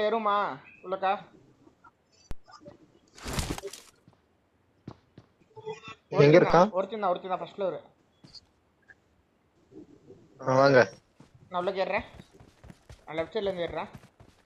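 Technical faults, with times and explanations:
2.31 s and 6.50 s: DC step. Each time, the waveform's zero line abruptly shifts by about -24 dBFS, as if an offset were suddenly added at the converter or input. A high-pass around 5 Hz then pulls the offset back to zero over a few tens of milliseconds. Each sudden jump and its slow recovery are heard as a brief low thump, while the sound itself carries on unchanged through both events.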